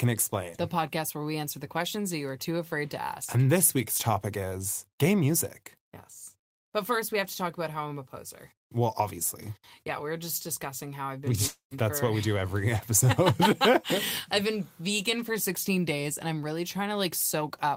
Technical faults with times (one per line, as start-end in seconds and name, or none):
11.47-11.74 long network dropout